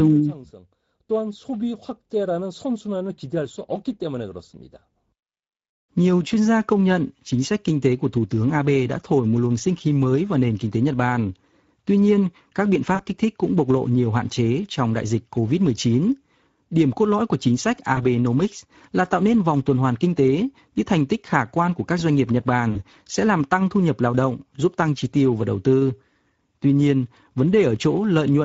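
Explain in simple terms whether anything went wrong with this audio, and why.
Speex codec, throughout: the speech is squeezed into so few bits that the detail of the voice gets thrown away. It comes out plainly hoarse and noisy. The upper part of the sound is filled in with a shaped hiss rather than real detail.

VoIP packet loss concealed by the speech codec, at about 12.95 to 13.03 s (after "nhiên các biện", before "kích thích cũng bộc"), 17.95 to 18.00 s (after "lõi của chính sách") and 22.71 to 22.83 s (before "sẽ làm tăng thu"): small pieces of the call, 20 to 40 ms each, never arrived. The decoder guessed by stretching the last bit it had into a fading sound, and the voice stays weak or distorted briefly afterwards.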